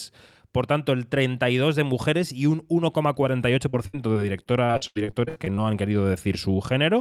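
From 3.69 to 5.59 s the speech turns choppy and robotic, with more than a dozen brief holes, the longest 79 ms. This is repeated packet loss: packets kept going missing, and each gap was patched by extending the preceding sound, covering about a quarter of that stretch.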